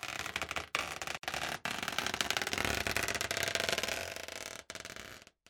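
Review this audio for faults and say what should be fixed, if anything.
Separately encoded pieces were joined without trimming encoder delay and end padding, causing a gap at a join of encoded pieces: about 58 ms of silence from 1.17 to 1.23 s, then the sound resumes. To prevent it, encode the material as one continuous stream, or trim each piece's encoder delay and padding before joining.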